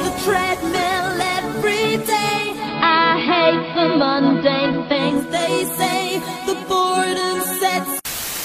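At 2.30 s the sound cross-fades, over about half a second, into a duller, hissier version of itself: digital radio blending to analogue, here to the AM broadcast. The treble drops, the level shifts by about 3 dB, and a steady hiss sits well below the signal. It returns at 5.43 s. A smooth fade with added hiss, rather than a hard cut or a gap, marks this as a blend and not a codec dropout.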